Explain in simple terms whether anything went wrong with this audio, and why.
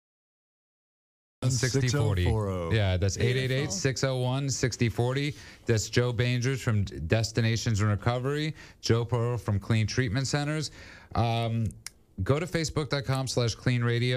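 The audio opens with about 1.4 seconds of dead silence, then the sound bursts in abruptly at 1.42 s, already partway through, with no natural build-up. This is a cut-off start: the recording or stream began late, missing the sound's beginning.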